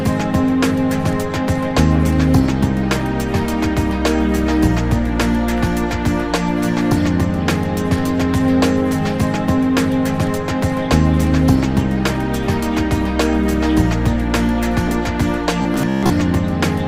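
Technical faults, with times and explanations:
15.62–16.10 s, robotic sound from repeated short buffers: a rigid metallic buzz fixed near 66.8 Hz, likely from one 15 ms chunk replayed over about half the stretch. Unlike a dropout, the gap is filled rather than silent.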